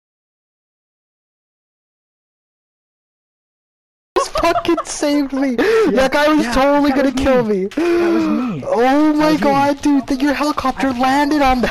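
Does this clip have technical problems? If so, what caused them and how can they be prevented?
Yes. An audio dropout to silence is already under way when the clip begins and lasts until 4.16 s. There is dead silence with no room tone, and then the sound cuts in mid-flow. The waveform is a flat line and the spectrogram is blank until then. The input was likely lost through a disconnected device, a failed link or a stray mute while recording carried on. Securing connections and monitoring input levels and mute states live would prevent it.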